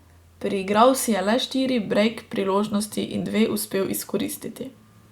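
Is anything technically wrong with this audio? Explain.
No, nothing technically wrong can be heard here.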